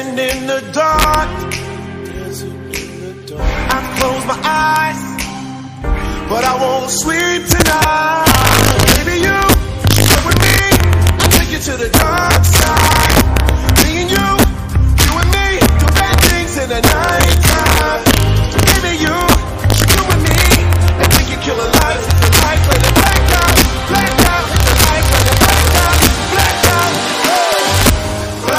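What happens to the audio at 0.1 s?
At 0.1 s the audio carries sharp, violent cracks wherever it runs loud, harsher and more abrupt than ordinary clipping, and the problem persists through the whole clip rather than just this moment. This is integer overflow: the signal is pushed about 3 dB past the top of the integer range, and instead of being held at the limit, those peaks wrap around to the opposite extreme. Only a small fraction of samples, around one in fifty, cross over.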